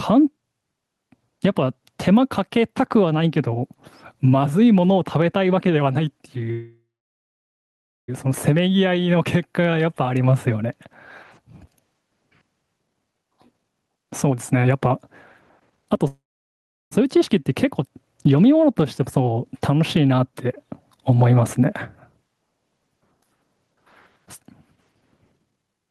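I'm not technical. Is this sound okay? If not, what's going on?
No. Gain pumping runs through the whole clip: the recording level is most likely set far too high, so an automatic control keeps pulling it down whenever the speech gets loud. Loud and soft parts end up closer in level, and everything sounds squashed.

Call audio freeze happens from 6.51 to 8.10 s and from 16.07 to 16.93 s. The sound stretches into a fading buzz and then goes silent, most likely because the network delayed the audio. When it resumes, nothing is lost; the speech simply continues later.

Jitter buffer speed-up happens from 12.79 to 14.93 s, 15.71 to 16.00 s and 24.25 to 25.90 s. The call software had a backlog of late audio and cut tiny slices out to catch up. The speech sounds rushed, up to about one and a half times normal speed, though the pitch stays the same.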